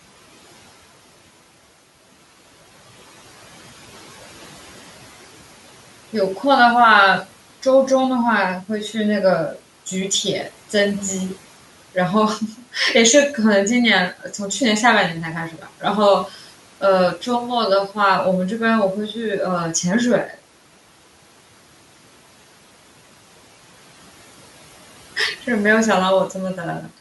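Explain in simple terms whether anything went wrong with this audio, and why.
Bits of the speech briefly sound swallowed and faint at 15.5 to 15.83 s, 16.28 to 16.4 s and 20.27 to 20.39 s. This is speech cut by the noise suppressor, which mistook these quiet moments for the background room noise and turned them down along with it.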